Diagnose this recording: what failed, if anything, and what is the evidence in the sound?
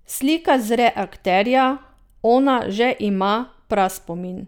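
Nothing in this speech recording points to a failure at any stage, so there's no diagnosis to make here.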